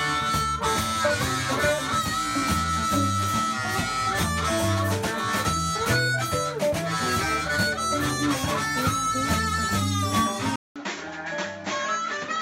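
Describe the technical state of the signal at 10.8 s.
At 10.8 s the signal sits inside a span from 10.56 s to the end where the input has likely switched to a poorer device: a 200 ms silence at the switch, then nothing above 7.6 kHz, a duller, boxier tone, a level a few dB lower, and a new background noise well below the signal.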